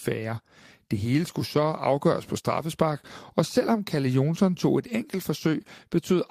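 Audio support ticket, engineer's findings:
No audible defects found in the speech signal: level, continuity and timing hold steady throughout, with no dropouts, glitches or distortion to attribute to any component.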